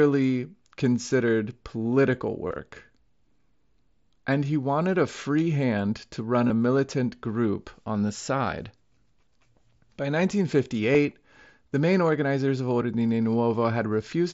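At 2.48 to 2.59 s, 6.48 to 6.50 s and 10.93 s there's concealed Bluetooth headset packet loss over the mSBC link. Lost stretches get patched with repeated recent waveform, so you hear brief buzzy fill, scattered and longest around 2.5 s.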